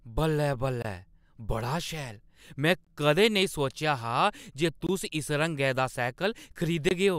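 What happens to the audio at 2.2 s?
Nothing goes wrong at 2.2 s; the speech there plays through intact, with no dropout, click or distortion.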